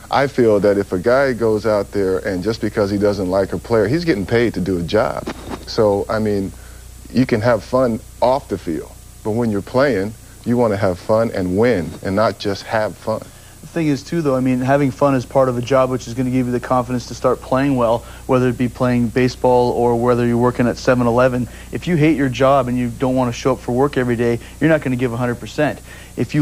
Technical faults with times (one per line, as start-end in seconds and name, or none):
24.42-24.46 DAB burbling